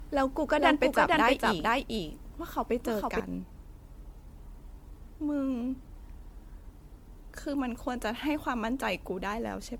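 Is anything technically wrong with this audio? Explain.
Yes, two faults are audible in this speech clip.

Generation loss runs throughout. The speech sounds swirly, smeared and hollow, and onsets are blurred, more than a single MP3 pass would cause. This likely comes from repeated re-encoding, perhaps seven or so passes, which fits a 96 kbit/s chain. Each new quantisation adds noise and spectral holes.

A doubled audio track is present from 0 s to 3.2 s, already under way when the clip begins. A second full-band copy, about as loud as the original, trails it by roughly half a second. It has no decay or room colour and stops abruptly at 3.2 s. The likely cause is a slower capture path or an edit that leaves two out-of-step copies.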